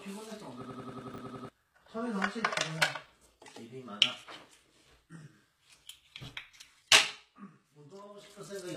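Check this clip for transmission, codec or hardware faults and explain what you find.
Three faults are audible: codec damage across the whole recording, a stuck loop near the start, and two brief reordering glitches.

HE-AAC compression runs throughout, and it is plainly audible. The treble has the gritty, metallic sheen of spectral band replication. The top of the spectrum is rebuilt by copying lower bands upward, so its harmonics don't line up with those below the crossover. The damage points to a low bitrate, likely around 20 kbps. On a spectrogram, the upper bands look like smeared, blocky copies of the lower region, and there is nothing above 14.9 kHz.

A system hang loop runs from 0.65 to 1.49 s. The playback side froze while the hardware kept replaying the same ring buffer. A slice of about 93 ms repeats exactly nine times, producing a machine-gun stutter at 10.8 Hz, which fits a 4096-sample buffer. 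Roughly 0.7 s of real audio is lost. On a waveform and a spectrogram, identical blocks tile the span at even 93 ms intervals.

Chunks out of order occur at 1.14 to 1.18 s and again at 3.06 to 3.10 s. In each case a 20 ms chunk arrived one chunk late and was played after the chunk that should follow it. Nothing is missing, but each spot has three hard joins, heard as a quick jumbled flicker. On the waveform, abrupt discontinuities appear at the splice points.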